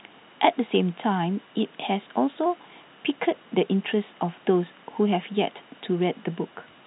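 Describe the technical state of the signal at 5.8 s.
At 5.8 s the speech is intact, with no dropout, click or distortion, only the narrow band-limited sound of G.711 telephone coding, which passes nothing above 4 kHz.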